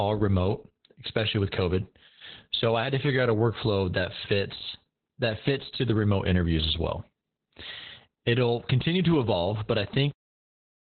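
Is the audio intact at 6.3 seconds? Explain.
No. At 6.3 seconds the speech carries Opus voice compression, which runs through the whole clip. Nothing is heard above about 4.3 kHz. The codec has cut the band to narrowband and uses its SILK linear-prediction coder. That coder models the voice's spectral shape and codes the excitation coarsely, which fits a bitrate near 8 kbps. The damage is heavy. The speech sounds muffled, hoarse and slightly robotic.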